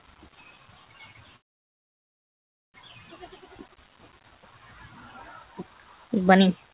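Right from the start, a speech-tuned noise suppressor is working on this sound. It keeps treating held tones and tails as noise, so the level pumps up and down by about 10 dB. At 1.36 s the audio stops dead for about 1.4 s until 2.76 s, then picks up where it left off. That's a call audio freeze, likely a jitter buffer running dry while packets were delayed, so nothing is lost but a gap is added. Later the suppressor cuts this sound specifically, from 5.76 to 6.10 s and again from 6.62 s to the end, sinking steady parts by about 5 dB and clipping their decay short.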